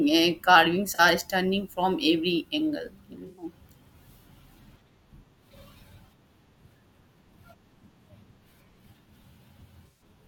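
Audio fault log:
0.94–1.00, 3.27–3.45, 9.86–10.02 s: AAC frame loss with concealment. Missing audio (about two, then five, frames' worth) is rebuilt from the last good spectrum, giving smeared, phasey patches, the first just before "stunning from every angle". On a spectrogram these show as blurred, flattened bands.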